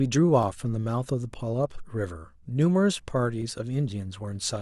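From 0.43 s to 4.43 s the speech is marked by periodic USB or driver dropouts: a tick arrives once every 1.0 s, around five in all. Each time, something blocks the audio path on a fixed schedule and a sliver of audio well under a millisecond long is skipped outright, not padded with silence. The waveform jumps across the gap, which is what produces the tick. It is heard only while the voice is sounding.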